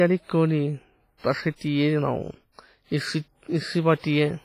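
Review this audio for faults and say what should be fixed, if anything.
The speech has heavy transform-codec damage from start to finish, likely WMA compression. Each syllable trails a ringing, washy smear. Quantisation noise spreads over long blocks, tens of milliseconds wide, so it leaks before and after each sound. A hiss breathes up and down with the signal. Weak detail is missing, as if zeroed. Nothing sounds above 15.4 kHz. The damage fits a low bitrate of around 24 kbps. To prevent it, keep a lossless master and encode at a higher bitrate with a better codec.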